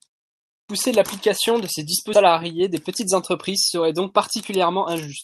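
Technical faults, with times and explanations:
0.46–0.69 s, clipped start after a pause: After 0.46 s of silence, the phrase "l’application de ces" begins abruptly with its first 230 ms or so missing. The playback device had idled through the quiet lead-in and needed time to wake, so the opening sounds were swallowed.
2.13–2.15 s, skip ahead: Right after "l’application de ces", playback jumps forward. Roughly 0.7 s of speech is gone, and the two sides are butted together with no silence and no filler. Later audio was already queued, so the stretch was discarded to catch up, and the delay fell by about that much. That seamless join is what separates it from a dropout, which would leave an audible gap or a concealment buzz.
2.27–3.33 s, 3.75–4.13 s and 4.63–5.07 s, jitter buffer speed-up: Three stretches run fast, at about 105%, 110% and 108% of normal speed. The buffer was holding more audio than it aimed for and trimmed it down by repeatedly cutting out pitch-period-sized slivers, a few tens of milliseconds in total per stretch. 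The speech sounds hurried while the pitch stays put, which distinguishes this from resampling or a pitch shift, where the voice would rise along with the tempo.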